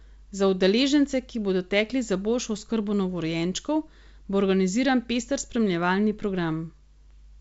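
Speech over G.722 wideband coding, with no faults heard.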